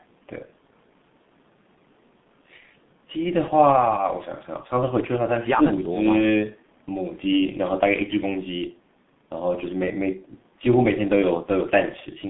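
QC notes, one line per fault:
throughout G.723.1 codec: muffled, hoarse speech with smeared consonants, confined to 150 Hz–3.6 kHz; the heavy damage fits a 6.3 kbit/s rate.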